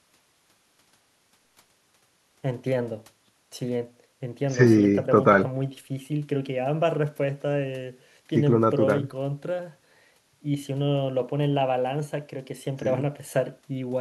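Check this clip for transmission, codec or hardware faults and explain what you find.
Nothing in the recording points to a fault in how it was carried, encoded or captured. There is nothing to report at any point in the speech.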